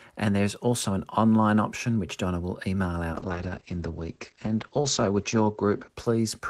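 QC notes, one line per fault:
3.14–6.5 s: call bitrate drop. Encoding falls from 32 to 10 kbps, bandwidth narrows from 20 kHz to 8 kHz, so the speech turns muffled and rough.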